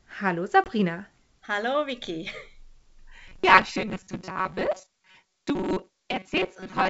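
Packet loss on an ADPCM call strikes at 0.64 to 0.70 s. About 20 ms of audio, roughly one packet, drops to silence, and the decoder's predictor falls out of step with the sender's, leaving a hard-edged gap.

Robotic sound from repeated short buffers runs from 3.28 s to the end: a rigid metallic buzz at 188 Hz. Its likely cause is late audio, with about half filled by repeats of a buffer near 5.3 ms.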